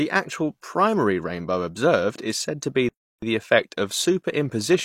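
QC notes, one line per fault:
2.89 to 3.22 s, playback stall: the speech stops mid-flow right after "is said to be" and the output goes silent for about 337 ms. It picks up again at "the effect of". The gap is a hard break in the sound, not a pause in the talk. The likely cause is the player running short of data or its playback thread being blocked, so nothing reached the output until it recovered.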